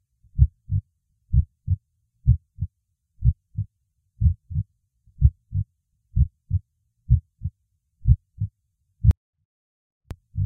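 A recording of sounds with a 24-bit alignment error from 9.11 to 10.11 s: samples held in a 32-bit word's low bytes were read as full 32-bit values, dropping the level by about 48 dB, nearly inaudible.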